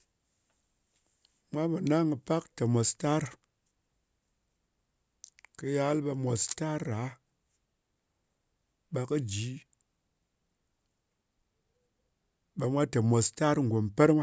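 Speech, and nothing is technically wrong with it.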